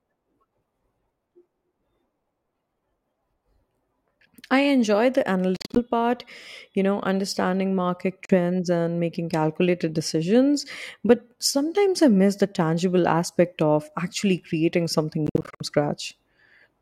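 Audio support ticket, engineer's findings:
Short silent holes at 5.56–5.80 s (about 140 ms lost in gaps up to 42 ms), 8.25–8.34 s (about 42 ms lost) and 15.27–15.65 s (about 210 ms lost, gaps up to 56 ms). Likely a Bluetooth dropout: late packets were discarded at the headphone link. Unlike an underrun stall, the sound resumes further on, as if it had kept playing.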